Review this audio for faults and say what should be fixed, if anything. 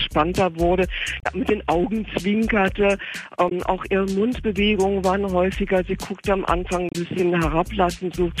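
Damaged data in a compressed stream appears three times: 1.19 to 1.27 s, 3.46 to 3.52 s, and 6.89 to 6.95 s. Each lasts 60 to 80 ms. At these points the compressed bytes are wrong. The decoder cannot read those frames cleanly, loses sync, and hunts for the next valid frame header. The audio breaks into a brief garbled blip before clean sound resumes. These three spots should be fixed. To prevent this, transfer and store the file with checksums or error-checked delivery and re-fetch any frames that fail verification.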